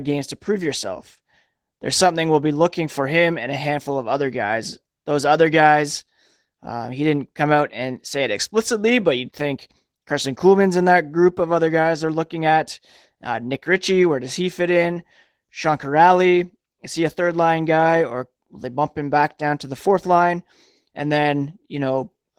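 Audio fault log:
Throughout: Opus voice compression. The speech is plainly coded: the voiced sound is roughened because the excitation is coded coarsely, and the band above 8 kHz is kept. This points to Opus in hybrid mode at about 16 kbps.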